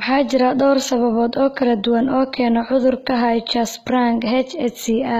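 HE-AAC compression runs through the whole clip, likely from a very low bitrate stream of around 20 kbps. The treble is rebuilt by copying lower bands upward rather than coded directly, so s sounds turn gritty and lispy, with nothing above 14.9 kHz.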